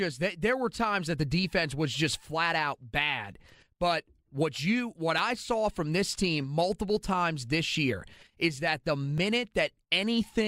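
Overlap between stream segments occurs at 9.18 s, just after "year is that the". Two consecutive segments, which appear to be about 4 s long, carry time stamps that overlap, so the player trims the shared stretch on the assumption it was duplicated. It wasn't, and roughly 5 ms of real speech is discarded. The waveform jumps straight across the gap, which comes through as a brief click or tiny skip in the sound.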